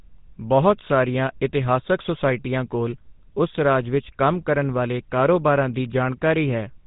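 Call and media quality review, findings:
Buzzy, gravelly speech throughout, plainly audible. Probable component: GSM full-rate codec, bitrate fits 13 kbps. Regular-pulse excitation roughens voicing. Spectrogram: nothing above 3.8 kHz, hard ceiling.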